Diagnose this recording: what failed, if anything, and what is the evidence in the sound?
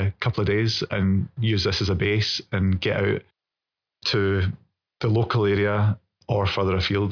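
Nothing in this recording points to a failure at any stage of the chain. With no events to place in time, there is no evidence to point to.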